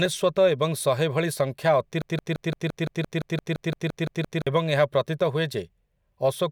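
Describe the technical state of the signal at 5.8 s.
At 5.8 s the speech signal is intact, with no audible technical fault at that moment.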